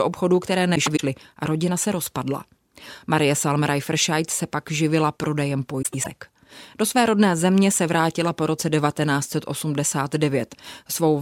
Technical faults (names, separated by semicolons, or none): frames out of order